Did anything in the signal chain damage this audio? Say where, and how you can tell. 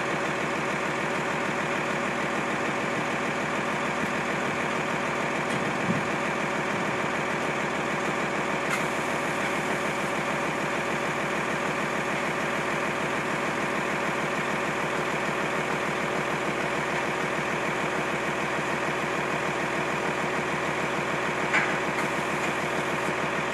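No, nothing in the signal chain damaged this audio.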